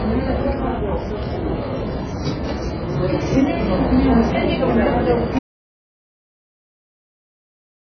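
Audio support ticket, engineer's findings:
AAC compression, whole clip: dull, smeared sound, fizzy texture, nothing above 7.5 kHz. Likely heavy AAC-LC coding; the lowered cut-off and coarse band quantisation point to a very low bitrate, around 12 kbps.

Audio dropout to silence, 5.39 s to end: audio cuts out mid-flow to silence, no room tone. Likely input lost (device disconnect, link failure or mute) while the recorder kept writing silence; everything after the cut is gone.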